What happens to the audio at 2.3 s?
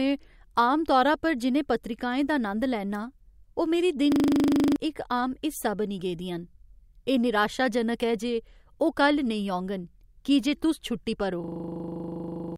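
Nothing goes wrong at 2.3 s; the speech runs through that moment without any dropout, click or distortion.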